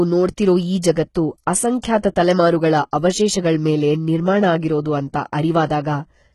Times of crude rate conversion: none

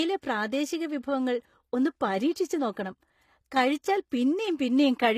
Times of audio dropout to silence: none

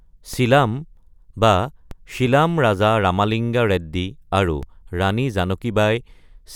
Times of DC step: 0.34, 1.91, 4.63

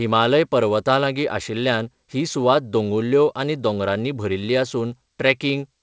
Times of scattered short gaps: none

